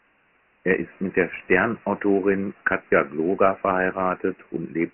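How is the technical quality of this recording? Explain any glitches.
Quality is poor throughout, held back by one fault across the whole clip. Dialogic VOX ADPCM: the speech was coded as 4-bit adaptive differential samples at 24 kbps, which fits a 6,000-samples-per-second rate. Nothing survives above 3.1 kHz, so the voice sounds muffled and phone-like, and the heavy coarse quantisation leaves a gritty hiss trailing the speech.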